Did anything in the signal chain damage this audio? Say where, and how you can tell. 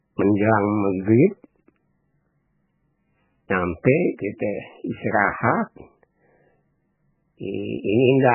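Yes. At the codec stage, the speech is cut off above 3 kHz throughout and sounds watery and swirly. That points to a very low bitrate, likely MP3 compression. A plain low-pass filter would sound dull but steady, not shimmering.

There is pre-echo at 3.83 s, a short hiss of about 14 ms just before a sharp attack. The transform spreads quantisation noise back through the block. Unlike a click, this noise leads into the onset.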